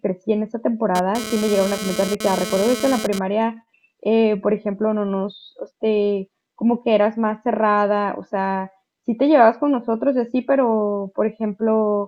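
From 0.95 to 3.19 s a GSM phone buzz sits under the speech: a hard, raspy 217 Hz tone full of harmonics, about 9 dB below the signal. A nearby 2G handset's data bursts are rectified by the audio circuitry, so the buzz lasts only for that transfer.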